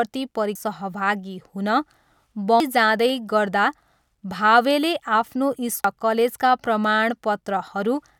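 Damaged data in the compressed speech stream gives brief glitches at 0.55 s, at 2.60 s just before "जाँदै गर्दा", and at 5.84 s right after "भावेले आफ्नो", as corrupted frames throw the decoder out of sync. Each shows as a sharp discontinuity on a spectrogram and a sharp glitch in the waveform.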